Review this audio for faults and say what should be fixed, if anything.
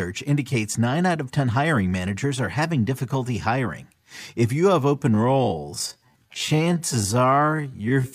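Software likely stretched the last part of this speech to fill a longer slot, holding the pitch steady by repeating short slices of the waveform rather than resampling. That produces a time-stretched section from 5.08 s to the end at 8.15 s, running at about 0.57 times the original speed. The pace drops abruptly at 5.08 s while the pitch stays put, and the slowed speech drags. Edit or re-record the material to fit the slot instead of stretching it that far.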